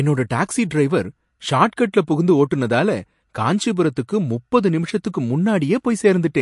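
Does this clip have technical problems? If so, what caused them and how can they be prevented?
Yes. Throughout the speech, a likely MP3 encode at a starved bitrate (the damage fits roughly 48 kbps) has forced the encoder to discard everything above 11.2 kHz and drop weak frequency lines frame by frame, leaving dull, watery, swirling sibilants and smeared onsets. Preventing it means encoding at a higher bitrate or keeping a lossless master.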